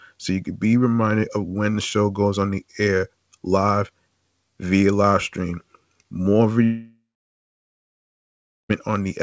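From 6.64 to 8.71 s the speech cuts out. A brief fading buzz or hiss gives way to near silence. This is likely a long network dropout.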